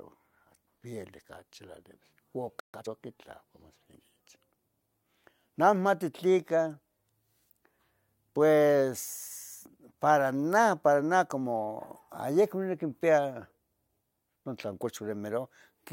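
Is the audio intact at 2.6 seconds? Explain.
No. Around 2.60 s the player likely ran out of buffered data or had its output thread blocked, producing a playback stall. The speech cuts off abruptly mid-flow and stays silent for 140 ms, until 2.74 s, when sound resumes.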